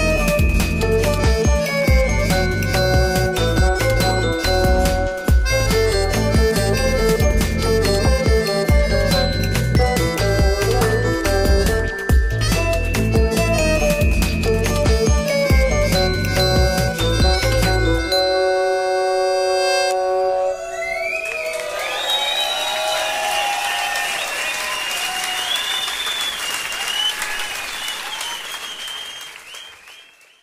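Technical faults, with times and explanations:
No technical faults are audible anywhere in the audio.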